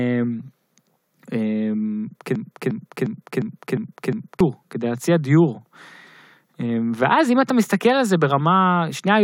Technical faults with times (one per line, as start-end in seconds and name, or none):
2.35-4.40 broken-record loop